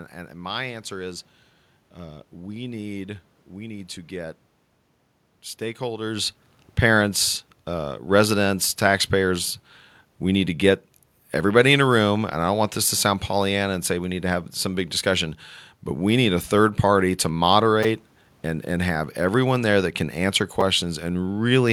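At 17.83 s and 20.61 s, a repeated buffer occurs: late audio made a roughly 5 ms segment replay several times, producing a brief buzzy click.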